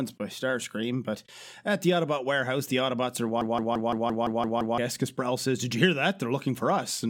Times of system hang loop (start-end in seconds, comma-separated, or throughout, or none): 3.41-4.78